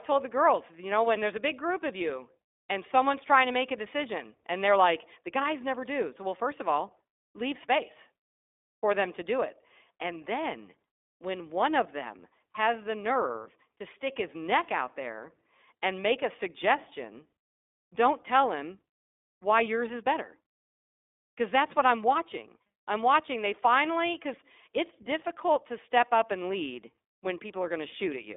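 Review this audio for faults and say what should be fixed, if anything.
The iLBC codec has processed the entire recording. Nothing reaches above about 3.8 kHz, and the line band is narrowed to roughly 250 Hz to 3.6 kHz, which gives the speech a thin, telephone-like quality. Each short block of excitation is coded without reference to the previous one, so the speech has a plainly audible rough, synthetic texture. The 20 ms block rhythm fits iLBC's 15.2 kbps mode. To prevent this, record or route the audio over a wideband path, such as a wideband VoIP codec or a direct local recording, rather than a narrowband iLBC link.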